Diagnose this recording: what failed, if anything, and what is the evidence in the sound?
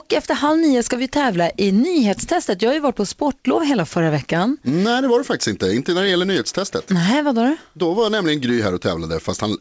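Nothing failed in this speech: the band stops at 8 kHz, which fits a wideband call path such as G.722, and no stage shows any fault.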